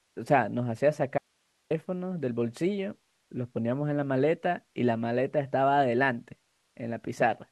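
A speech clip with an audio dropout to a faint residue from 1.18 to 1.71 s, cutting abruptly to low hiss for about 520 ms, likely a brief loss of the signal feed.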